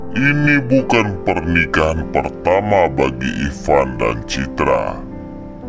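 A wrong sample rate runs through the whole clip: the audio is played back at two-thirds of its original rate with no conversion, consistent with 24 kHz material played at 16 kHz. Everything sounds slowed to 0.667 times normal speed and about seven semitones lower in pitch.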